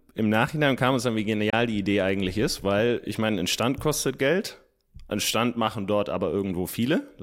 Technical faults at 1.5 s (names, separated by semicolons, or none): Bluetooth dropout